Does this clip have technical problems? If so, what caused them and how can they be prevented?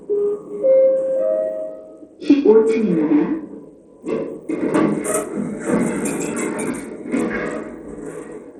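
Yes. Throughout the clip, the everyday sound was likely squeezed through Bluetooth SBC compression with a tiny bit budget, which fits about 80 kbps. The top sub-bands starve, so the treble drops out and flickers, and gritty noise rides on everything. To prevent it, record over a wired link, or raise the SBC bitpool or switch to a higher-quality Bluetooth codec.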